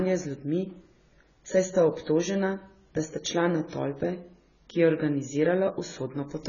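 AAC compression, heard across the whole speech clip: nothing reaches above 7 kHz, so the sound is dull, and the heavy damage leaves a smeared, warbling texture on sustained vowels and a fizzy edge on sibilants. The likely cause is AAC-LC coding at a very low bitrate, one that fits roughly 16 kbps. With so few bits, the encoder cuts the top band away and quantises the remaining frequency lines coarsely, leaving gaps the ear hears as swirling artefacts.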